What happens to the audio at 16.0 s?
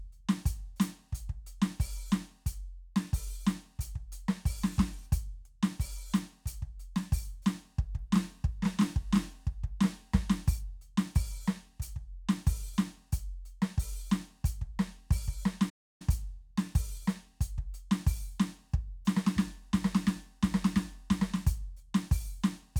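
At 16.0 s the music is ending a playback stall that began at 15.69 s and clears at 16.02 s: a silence of about 0.3 s cutting off the sound mid-phrase, likely from the player running short of data. The waveform drops to a flat line, and the spectrogram shows a blank vertical band.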